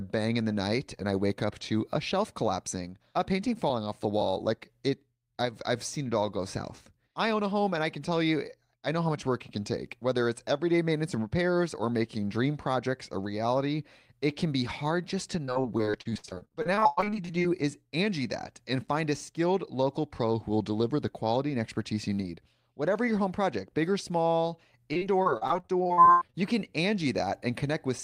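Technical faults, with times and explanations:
15.45–17.50 s, repeated packet loss (robotic sound), right after "be hard just to": 29 short dropouts, none longer than about 100 ms, each patched by stretching the preceding sound, so about a third of this stretch is synthetic fill and the speech turns choppy.
24.93–26.35 s, repeated packet loss (robotic sound), after "project big or small" and before "you can": 14 similar gaps, again up to about 100 ms, with roughly 31% of the span concealed. This produces the same choppy texture with fragments missing.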